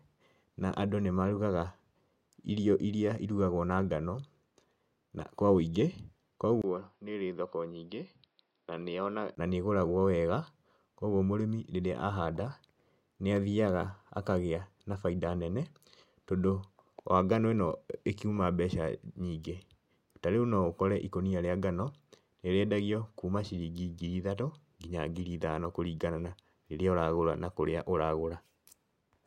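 Speech that turns abruptly duller and quieter at 6.62 s, after a brief 20 ms gap, losing everything above 5.6 kHz and dropping a few decibels, with faint new background noise, before clearing again at 9.37 s. The likely cause is an input switched to a poorer device.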